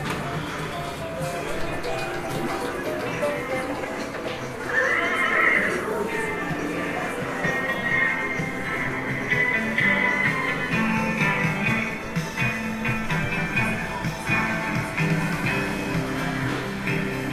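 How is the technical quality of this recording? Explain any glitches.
No glitches or faults heard.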